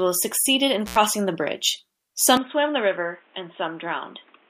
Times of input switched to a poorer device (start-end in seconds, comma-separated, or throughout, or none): 2.37-4.50